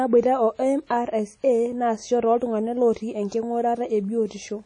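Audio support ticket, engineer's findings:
Ringing, washy speech throughout, hiss pumping with the signal, nothing above 10.1 kHz. Likely WMA compression: long transform blocks smear quantisation noise over tens of milliseconds; weak lines zeroed. Damage plainly audible, consistent with a low bitrate, around 32 kbps.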